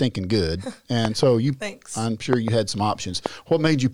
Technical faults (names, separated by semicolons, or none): loud pop